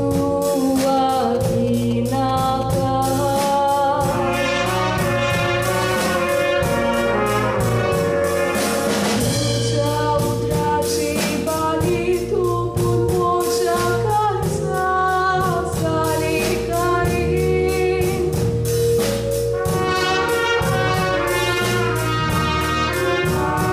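From 0.88 s to 2.63 s there are GSM signalling bursts: a nearby 2G phone's intermittent radio transmissions are rectified by the audio circuitry, producing a galloping dit-dit-dit of short buzzes at about 217 Hz, sitting roughly 15 dB below the wanted sound.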